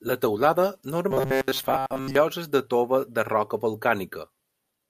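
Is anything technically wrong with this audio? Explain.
Yes. From 1.11 to 2.15 s the speech takes on robotic sound from repeated short buffers: a rigid metallic buzz near 133 Hz. The likely cause is starved playback looping a roughly 7.5 ms fragment for most of that span while real audio is skipped.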